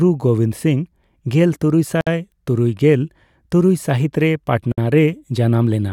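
At 2.01 to 2.07 s and 4.72 to 4.78 s, the speech drops out for about 60 ms. Each is a gap at a join of encoded pieces: encoder start delay and end padding were left in. The edges are smeared, and the speech resumes where it stopped.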